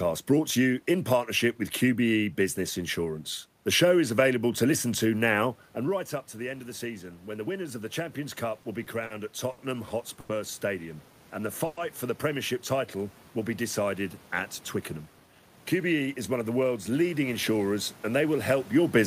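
From 5.85 to 10.68 s, after "listen to now and", automatic gain rising lifts the voice and room noise together by about 6 dB. On the waveform, the envelope widens steadily rather than in a jump.

Between 8.62 and 9.60 s there are repeated stalls (stutter). Late packets emptied the buffer four times, and 140 ms of held sound was filled in, the longest gap 60 ms. These show as short, smeared, frozen harmonic patches.

At 10.20 s a short stall from a late packet stretches the last sound for 90 ms. It appears as a flat, held block in the spectrogram before the speech resumes where it stopped.

From 11.06 to 11.48 s a jitter buffer slow-down repeats pitch periods, adding 47 ms. The speech runs at about 91% speed with unchanged pitch, and the spectrogram shows harmonic stripes drawn out in time.

From 11.66 to 11.79 s, just before "for the", a call audio freeze continues the previous sound as a 110 ms hold, likely caused by packets held up in transit. 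The waveform shows a repetitive, slightly decaying stretch.

From 14.76 to 16.89 s, between "will be decided at" and "leading insurers and they", a jitter buffer speed-up trims roughly 200 ms. Speech hurries at 110% speed, and the syllables look compressed horizontally on the spectrogram.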